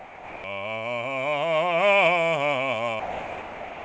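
From 0 to 0.44 s, and again from 3.00 s to the end, the music gives way to steady comfort noise. This is sound dropped by the voice detector, likely because the sender mistook the music for background and stopped sending.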